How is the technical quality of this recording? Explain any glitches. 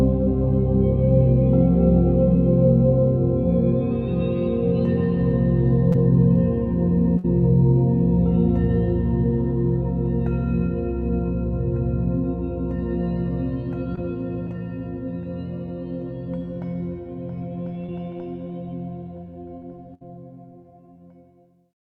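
The recording is marred by five dropouts from network transmission: three brief concealed gaps and two longer bursts of packet loss.

Short concealed packet loss occurs at 5.92 s, 13.96 s and 17.86 s. Each is a quick smear or wobble lasting a few hundredths of a second. About 20 ms of audio failed to arrive in time each time. The receiver patched the hole by extending the sound just before it for roughly 10 to 20 ms, then blended back into the real signal.

Bursts of packet loss occur at 7.18 to 7.26 s and 19.94 to 20.03 s. Each is a held, fading tail followed by a small jump forward. In each case about 60 ms of consecutive audio was lost. The decoder carried the preceding sound on for 55 ms and 64 ms respectively, turning it down as the gap lengthened. Playback then resumed past the missing stretch, so that short portion is absent.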